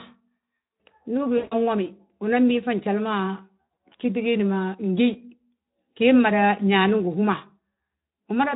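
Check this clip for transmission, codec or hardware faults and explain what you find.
Two dropouts of VoIP packet loss concealed by the speech codec, at 1.37 to 1.55 s and 3.61 to 3.77 s. The underlying Speex coding adds only light hoarseness. In the first dropout about 140 ms of audio is missing, which fits a run of seven 20 ms frames. In the second, about 120 ms is lost across 160 ms, with the longest gap 80 ms. The decoder keeps extending its last pitch and filter at falling gain, so each gap sounds like a smeared, buzzy tone or coloured noise that fades. The speech stays weak and distorted for a short time after the dropout ends.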